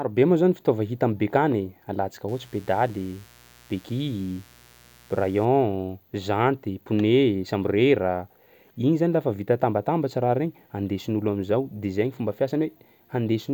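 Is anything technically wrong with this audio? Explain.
Yes. From 2.28 s to 5.45 s the speech carries mains buzz at 60 Hz, sitting around 30 dB below the speech level. Sharp switching spikes from something like a dimmer, rectifier or unshielded run get into the signal path twice per mains cycle, producing a dense series of 60 Hz harmonics extending up to several kilohertz. The result is a steady, raspy buzz under the speech for those three seconds, rather than a smooth low hum.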